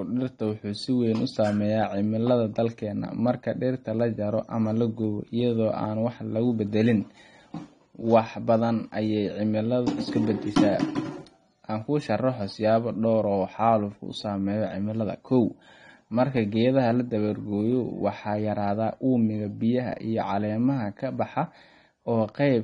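Throughout, the speech sounds dull and smeared, with a fizzy, warbling edge on sibilants and nothing above about 9.7 kHz. This is likely AAC compression (AAC-LC), where a low bitrate, consistent with around 32 kbps, forces a lowered cut-off and coarse quantisation.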